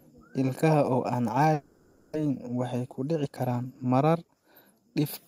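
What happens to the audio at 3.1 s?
At 3.1 s you're in the middle of a jitter buffer speed-up, running from 2.25 to 4.29 s. The receiver had too much audio queued, so it trimmed short pitch-period chunks over and over, about a fifth of a second in total. The speech plays about 10% faster at the same pitch and sounds a bit rushed.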